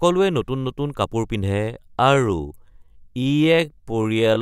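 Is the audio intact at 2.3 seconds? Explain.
No. At 2.3 s the speech sits inside a time-stretched section running from 1.42 s to the end, slowed to about 0.59 times its pace with the pitch unchanged, so it drags. Likely cause: software lengthening the audio by repeating short pieces.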